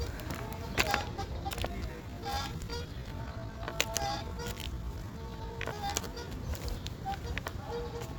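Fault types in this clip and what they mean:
Time-stretched section: likely software slowed part of the audio to about two-thirds speed, repeating short pieces to keep pitch, so from 1.64 to 6.26 s it drags.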